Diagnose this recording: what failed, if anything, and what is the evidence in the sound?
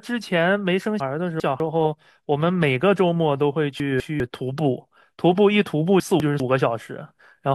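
The speech jumbles at three points, which is chunks out of order at the buffering stage. Between 1.0 and 1.6 s, one 200 ms block plays two blocks late. Between 3.8 and 4.2 s and again between 6.0 and 6.4 s, a block plays one block late. Nothing is missing, but the sequence is scrambled and each swap leaves three hard joins. On a waveform these show as abrupt discontinuities, and a spectrogram shows vertical broadband lines where the formant tracks break and resume misaligned.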